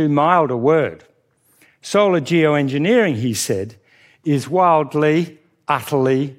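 Listening to this speech recording, nothing technical stood out as wrong at any point.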